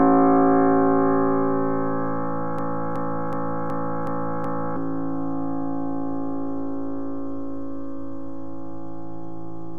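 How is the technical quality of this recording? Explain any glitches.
The recording has one clear glitch, a broken-record loop. From 2.59 s to 4.76 s, a fragment of about 372 ms plays six times in a row. Each repeat is identical. The cause is likely a stalled player, encoder or stream that kept resending the last chunk in its buffer. Whatever should have sounded in those two seconds is missing. Normal audio resumes at 4.76 s.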